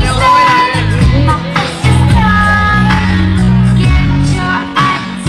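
At 2.29 s the pace suddenly drops and stays slowed through to the end: a time-stretched section running at roughly 0.58 times normal speed, with pitch unchanged. The likely cause is software lengthening the audio by repeating short pieces. On a spectrogram, harmonics keep their frequencies but events spread wider in time, with soft vertical seams; the waveform shows repeated, stuttering grain patterns.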